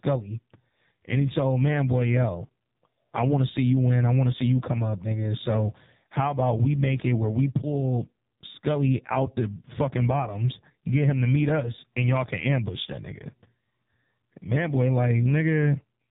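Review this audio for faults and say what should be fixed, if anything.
Throughout the speech runs through an AMR narrowband mobile codec with heavy damage. The voice is rebuilt from a vocal-tract model fed by sparse pulses, so it sounds buzzy and synthetic, and the thin, coarse quality points to one of the lowest AMR-NB modes, around 5.9 kbps. On a spectrogram everything stops at a hard ceiling near 3.8 kHz, with empty space above it and harmonics below looking blurred and blocky at the 20 ms frame rate. To prevent it, capture or route the call over a wideband path at a higher codec bitrate rather than narrowband AMR.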